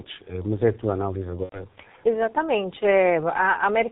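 It's a speech clip carried throughout by the G.723.1 codec, muffled and hoarse with nothing above 4 kHz, which fits a roughly 6 kbit/s stream. Right after "é a tua análise", around 1.43 to 1.57 s, VoIP packet loss concealed by the speech codec takes out about 90 ms, three frames in a row. The sound is stretched into a fading buzzy tone or coloured noise and then muted on the third lost frame, and it stays weak for a bit afterwards.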